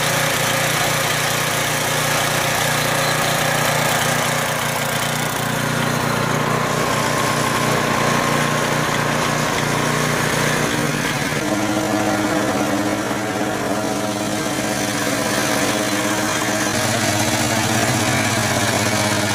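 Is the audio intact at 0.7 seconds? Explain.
Yes, the audio is intact at 0.7 seconds, with no fault present at that moment.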